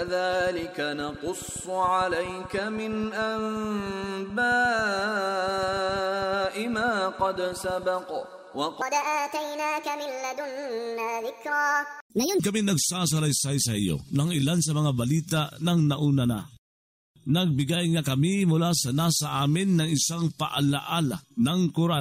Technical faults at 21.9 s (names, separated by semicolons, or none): none